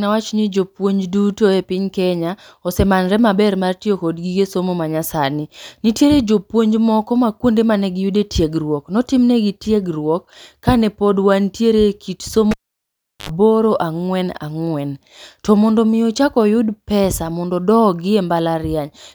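At 12.51 s the speech is cut by a cable pulled and plugged in. The sound stops with a sharp pop, a vertical spike on the waveform and a broadband stripe on the spectrogram. Near silence follows for about 0.73 s, a flat trace and a dark gap. As the plug goes back, only its tip makes contact for about 72 ms, giving a burst of 50 Hz mains buzz, seen as stacked horizontal lines at 50 Hz multiples. A second pop at 13.29 s restores the speech.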